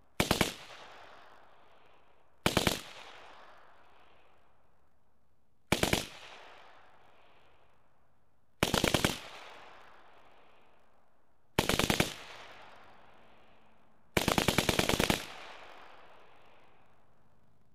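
From start to finish the sound carries buffer tearing: the writer and the hardware reader of the ring buffer have drifted so they cross inside every 20 ms period. About a fifth of each period replays audio from roughly 40 ms earlier, with hard joins on both sides. The result is a robotic 50 Hz rattle that rides on the signal and vanishes in silence. A waveform shows regular discontinuities every 20 ms, and a spectrogram shows vertical striping with comb-like 50 Hz sidebands.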